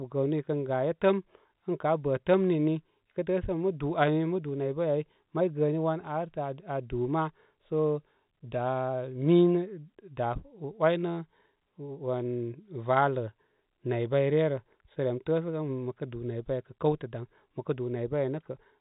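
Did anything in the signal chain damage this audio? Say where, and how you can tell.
No, nothing in the chain damaged this speech.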